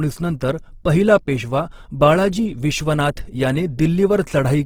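Throughout the speech, the sound has a grainy, rough texture, with harmonics smeared into a noisy wash rather than a swirl. This is the signature of Opus compression, likely in its CELT music mode at a low bitrate, which fits something near 16 kbps. Short of bits, the encoder keeps each band's energy but fills the fine detail with folded or noise content, so tones lose their purity. Bandwidth stays full, extending to about 20.2 kHz.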